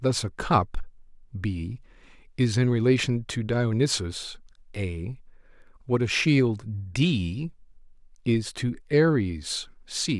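No technical faults are audible anywhere in the recording.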